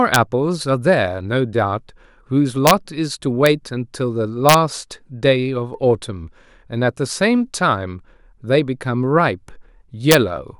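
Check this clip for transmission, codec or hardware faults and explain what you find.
Violent, sharp cracks break through the speech at 0.14 s, 2.67 to 2.71 s, 3.46 s, 4.49 to 4.54 s and 10.11 to 10.15 s, much harsher than ordinary clipping. This is integer overflow. On these loud peaks the signal was pushed up to about 3 dB past the largest value the integer format can hold, and instead of being limited there it wrapped around to the opposite extreme. Each such sample jumps across the full range, producing these brief, explosive cracks.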